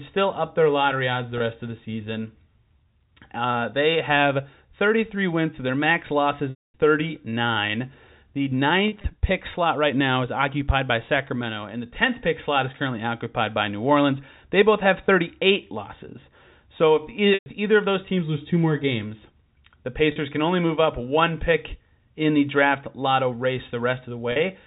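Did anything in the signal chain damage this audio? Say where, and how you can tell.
Yes, at the network stage: packet loss with pitch repetition, six times, at 1.38 s, 6.5–6.74 s (right after "wins so their max"), 8.88–9.04 s (before "pick slot right now"), 17.34–17.46 s, 20.12–20.16 s (between "two more games the" and "can only move up"), and 24.32–24.36 s. The receiver loops the last pitch period into each gap and fades it over about 50 ms. The short ones turn into a held, buzzy tone. The 240 ms and 120 ms gaps run past that fade into silence, then cross-fade back. Around 9 s the losses come in bits, about 60 ms spread over 160 ms. The G.711 telephone band underneath sounds as it should.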